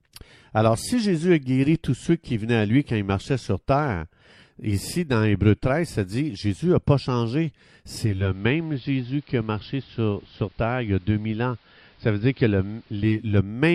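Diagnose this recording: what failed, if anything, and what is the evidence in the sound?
At 7.96 s, just after "n'a pas changé", the speech dulls over roughly half a second (about 470 ms), loses its treble, drops about 1 dB, and picks up a faint hiss well below the speech until 13.42 s. This is digital radio blending to analogue, upstream in the hybrid receiver: the digital stream failed and the set cross-faded to the same station's AM broadcast, whose narrow bandwidth and background noise stay until the end of the blend.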